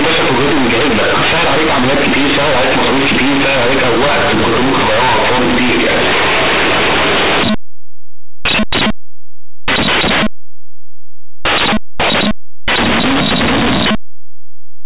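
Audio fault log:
Throughout: companded audio read as linear. A-law bytes play as plain 8-bit samples, unexpanded. Quiet parts swing large, giving loud buzzing distortion and noisy pauses.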